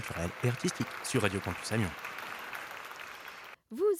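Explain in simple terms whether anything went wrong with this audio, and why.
Nothing went wrong here: the signal stays steady and intact the whole way, with no breaks, jumps or distortion anywhere in it.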